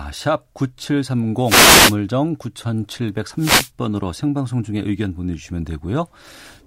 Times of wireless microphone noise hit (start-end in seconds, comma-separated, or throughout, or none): 1.43-1.97, 3.37-3.70